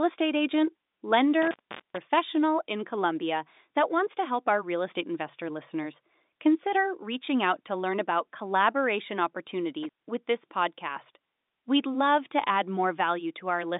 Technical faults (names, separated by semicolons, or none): intermittent contact